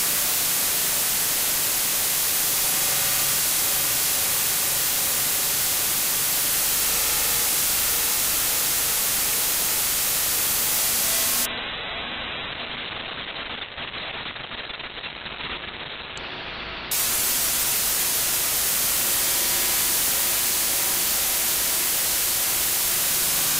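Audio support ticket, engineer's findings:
Call bitrate drop, 11.47 to 19.47 s. Sound turns muffled, rough and watery. Top end collapses from 20 kHz to about 4 kHz. Worst stretch lasts about 4.2 s. Probable component: sender bandwidth estimator driving the Opus encoder. Estimate fell, encoder was given far fewer bits. Coarse coding plus band-limiting follow. Degradation fits a fall from roughly 64 kbps to about 7 kbps. Full bandwidth returns at 19.47 s as the rate recovers.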